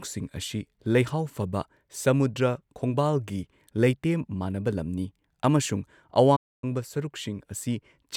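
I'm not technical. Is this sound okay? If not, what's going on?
No. From 6.36 to 6.64 s the speech goes silent: a playback stall, likely the player briefly running out of data. It's a clean gap, not a crackle.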